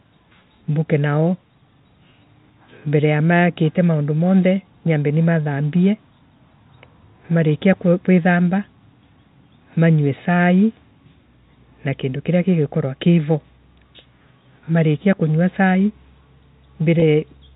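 At 17.0 to 17.02 s, near the very end of the speech, about 20 ms of audio went missing, which fits a single lost packet. This is packet loss with pitch repetition: the receiver bridged the gap by repeating the last pitch period of the speech instead of leaving a hole. Because the loss is so short, it comes across as a brief, slightly held, buzzy sustain rather than a dropout, over a G.711 telephone-band signal.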